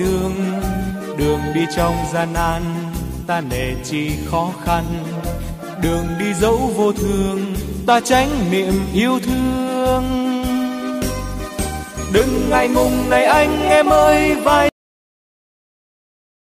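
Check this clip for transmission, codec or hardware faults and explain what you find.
There is one fault, a cut-off end. At 14.69 s the sound stops abruptly in mid-flow and the remaining 1.8 s to the end are digital silence. The final buffers of audio were never written out or played, so nothing decays naturally. The sound simply vanishes, with a hard edge where it drops out. On a waveform the trace collapses from full activity to a flat zero line. On a spectrogram all energy ends at a sharp vertical boundary, followed by blank black.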